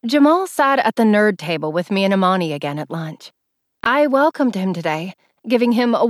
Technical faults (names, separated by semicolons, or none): repeated buffer